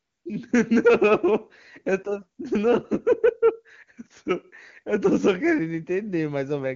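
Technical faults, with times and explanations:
0.00–0.25 s, AMR comfort noise: no speech frames were sent for the opening 254 ms, so the receiver generated synthetic noise from a coarse level and spectrum estimate. The real background is replaced by a smooth, steady hiss until AMR-WB speech coding begins.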